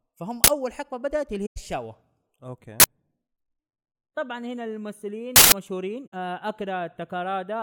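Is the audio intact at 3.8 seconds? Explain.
Yes, the speech at 3.8 seconds plays through cleanly, with no dropout, click or other audible fault at that moment.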